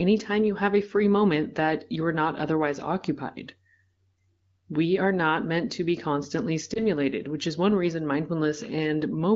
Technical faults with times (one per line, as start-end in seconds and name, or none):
6.73-6.83 lost AMR speech frames